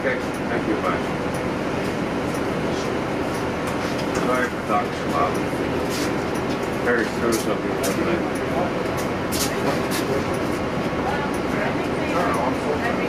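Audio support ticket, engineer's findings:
No faults found on listening; nothing audible to trace to any component in the chain.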